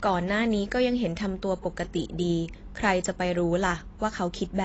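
Right from the start and all the way through, the speech has that dull, smeared quality with nothing above 8 kHz, plus a fizzy, warbly edge on sibilants. It's likely AAC compression, squeezed hard enough to suggest a low bitrate around 24 kbps.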